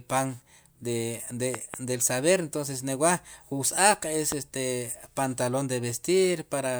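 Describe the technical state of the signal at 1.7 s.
At 1.7 s, a loud pop: two sharp clicks between 1.55 and 1.76 s, likely voltage pulses, peaking roughly 15 dB above the speech. They appear as tall waveform spikes and full-band vertical spectrogram streaks.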